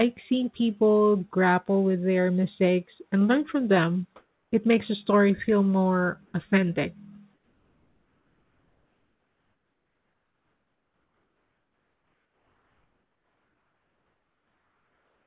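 At 4.16 s, right after "and learn from them", the room background gives way to steady, featureless hiss for 0.36 s, about 8 dB louder. It happens again briefly at 6.26 s after "the story feel more", and from 7.34 s after "story feel more authentic" to the end, about 5 dB quieter. This is comfort noise in place of the background, likely from discontinuous transmission. A gate would leave silence instead. All of it sits below 4 kHz, as expected over a G.711 call path.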